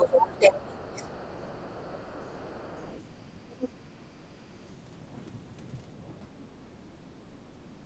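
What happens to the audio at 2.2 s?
At 2.2 s the other side's voice is leaking through. A faint second voice runs under the main speech from 0.78 to 3.0 s, far quieter than the talker. The likely cause is that the echo canceller left some of the far-end loudspeaker sound in the microphone signal. On a spectrogram it shows as weak, separate harmonic traces under the stronger speech bands. On the waveform it adds only a low-level fill, with little visible change in the envelope.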